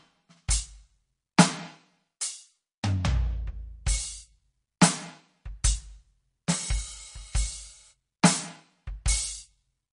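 Throughout the music, the treble stops dead at 10.6 kHz and the sound turns watery and swirly, likely MP3 compression at a low rate, fitting about 40 kbps rather than simple filtering. At 1.37 s, pre-echo puts a brief hiss, about 11 ms, just ahead of an attack, which softens it, unlike a click that lands on the transient itself.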